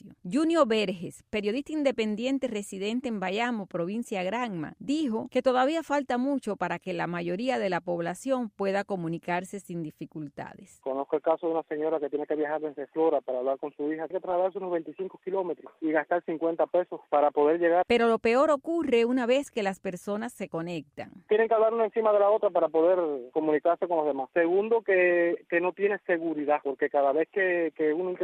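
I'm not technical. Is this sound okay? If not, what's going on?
No. There are three brief chirps or blips, at 4.07 to 4.10, at 11.34 and at 14.32 to 14.35 seconds, the last one louder. Each is a corrupt frame decoded: a small chunk of compressed audio was damaged, and the player played it anyway, producing stray noise.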